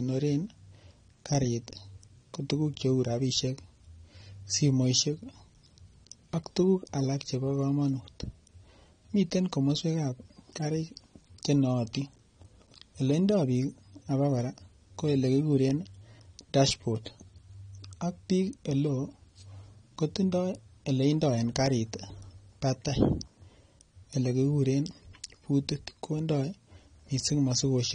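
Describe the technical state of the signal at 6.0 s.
At 6.0 s the speech carries the same AAC compression damage heard throughout the clip. Nothing survives above about 9.7 kHz, so sibilants sound dull and smeared, with a fizzy, warbling edge. The likely cause is AAC-LC coding at a low rate, consistent with roughly 32 kbps, where bands judged less audible are starved of bits and the top is cut away. On a spectrogram this shows as a hard ceiling near 9.7 kHz.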